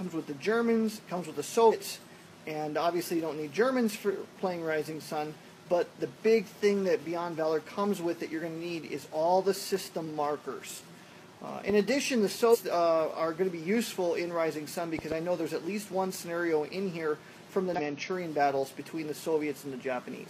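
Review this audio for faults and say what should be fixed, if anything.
Damaged data in a compressed stream causes brief glitches at 1.68–1.73 s, 12.50–12.57 s and 17.74–17.80 s. The decoder misreads corrupt frames and skips ahead to resync.

Loud pops sit about 10 dB above the sound. There is one at 11.70–11.72 s and two at 14.99–15.14 s. The likely cause is a voltage step from a plug, switch or driver glitch.

Verify stream checksums and secure cabling and switching to prevent both.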